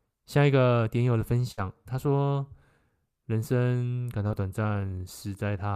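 A short bit of speech with two network dropouts in it. The first is a burst of packet loss from about 1.51 to 1.59 s. Roughly 60 ms of audio never arrived, so the decoder kept extending the last sound it had and let it fade. You get a held, decaying tail standing in for the real audio. When the sound picks up again it has jumped ahead, and whatever was in that stretch is simply gone. The second is much smaller, a short concealed packet loss at about 4.27 to 4.31 s where around 20 ms went missing. The receiver patched the hole by carrying the previous sound forward and then blending back into the live signal. At that length it comes across as a quick smear or tiny wobble rather than an obvious gap.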